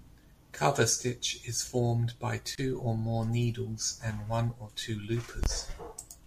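Separately encoded pieces of this speech were joined without trimming encoder delay and end padding, leaving a gap at a join of encoded pieces: a gap of about 27 ms at 2.55 s, after "is formed by", and 23 ms at 5.44 s, after "and one or two", each with smeared edges.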